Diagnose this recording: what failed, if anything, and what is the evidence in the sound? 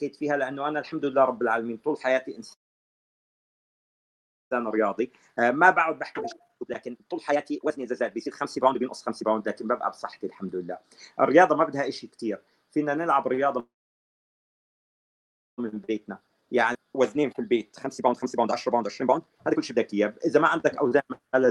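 Call audio freeze at 2.53–4.53 s and again at 13.60–15.60 s, each about 2 s long and almost entirely silent, with nothing lost when sound resumes. This is a network-stage stall: delayed packets likely emptied the jitter buffer, and the receiver played silence until they arrived, shifting everything later by about 2 s.

Jitter buffer speed-up at 4.77–9.73 s (138% speed), 10.19–11.31 s (106%) and 16.05–21.45 s (123%). The audio runs hurried at unchanged pitch. After each freeze the buffer held surplus audio, so it trimmed repeated pitch-period slices, roughly 2 s and 1.5 s in the large stretches, to recover latency.

Skip ahead at 16.73–16.77 s, inside the third speed-up. Playback jumps forward almost seamlessly, with roughly 0.7 s of audio dropped and both sides butted together. A block was dropped outright, either in transit or by the overfilled jitter buffer, rather than only compressed, since later packets were already queued.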